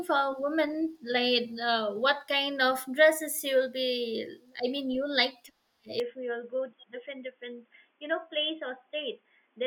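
The recording input was likely switched to a poorer device, such as another microphone or a headset's call profile, at about 6.0 s, with no gap at the changeover. From there to the end the speech is band-limited, with nothing above 3.4 kHz, so it turns abruptly dull and boxy. It also drops to a somewhat lower level and picks up a faint new background noise that sits well below the speech.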